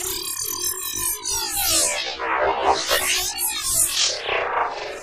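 Everyday sounds, with no technical faults to be heard.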